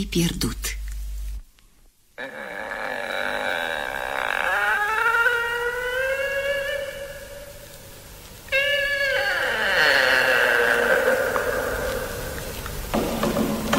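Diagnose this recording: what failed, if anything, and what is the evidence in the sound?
The converter is where this one went wrong: there's sample clock jitter from about 3.49 s to 7.32 s. Through that stretch a fine hiss and grit rides on the sound, heavier on the loud and bright parts and gone in the gaps. The sampling clock is wandering by a few microseconds, so each sample lands at a slightly wrong moment. On steep waveform slopes that timing slip becomes an amplitude error, roughly 25 dB below the signal.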